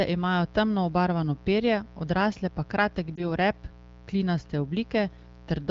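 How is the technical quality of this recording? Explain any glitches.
Two faults affect the speech: a constant electrical buzz and one brief decoding glitch. The AMR wideband (HD Voice) coding itself sounds clear.

Throughout, a steady, raspy mains buzz sits roughly 25 dB below the speech. A dimmer or poorly shielded rectifier injects switching spikes, spreading 60 Hz harmonics into the kilohertz range, which sounds harsher than a smooth hum.

From 3.16 to 3.27 s, lost AMR speech frames cause a brief dip or warble. The decoder replays the last good pitch and vocal tract settings at falling gain, which fits one missing 20 ms frame. The sound smears briefly instead of cutting cleanly to silence.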